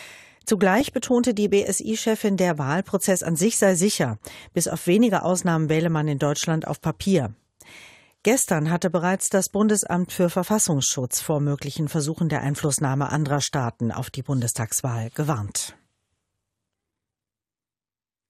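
From the start and throughout, the sound is dull and gurgling, with a granular grain and upper bands flickering in and out. This is MP2 compression, likely at a rate around 80 kbps, too few bits for all 32 sub-bands, so upper ones are switched off and the rest are coarsely quantised.

From 0.74 to 0.93 s a brief muddy bubbling breaks out, with squelchy chirps over the audio. This is DAB burbling: bit errors, at a rate well under one percent, slipped past error correction into the MP2 data, so corrupted samples put blips of noise in single sub-bands and corrupted scale factors made individual sub-bands jump in level for up to a frame.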